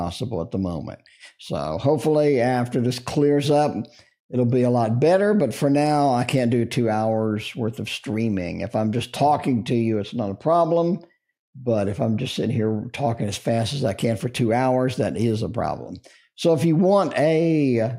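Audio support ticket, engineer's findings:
Nothing stood out on listening; no symptom was found to trace to any component.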